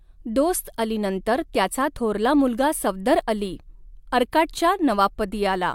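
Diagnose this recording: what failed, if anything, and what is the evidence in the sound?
Nothing failed; no faults heard.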